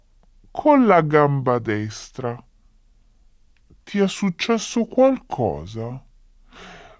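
Throughout, a wrong sample rate: speech plays at 0.67 times speed and 7 semitones lower, consistent with 24 kHz audio played back at 16 kHz.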